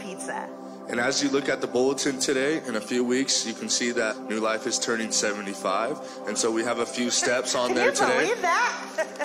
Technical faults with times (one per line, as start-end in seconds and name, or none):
4.07-4.13 damaged data in a compressed stream